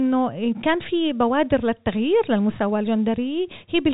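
No technical faults can be heard in the speech.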